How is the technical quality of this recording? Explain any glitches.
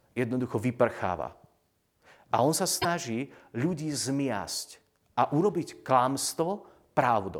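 One glitch mars the recording, from 2.78 to 2.85 s, a burst of about 70 ms caused by damaged data in a compressed stream. Some of the encoded bytes there were corrupted, so the decoder misread those frames, lost sync and hunted for the next valid frame header before resuming. It sounds like a short chirp, squawk, click or hole cutting across the speech. On a spectrogram it shows as a brief vertical disturbance unrelated to the surrounding harmonics. The waveform shows an abrupt disruption with discontinuities at its edges.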